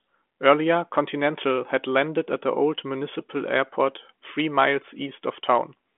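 No technical faults can be heard in this recording.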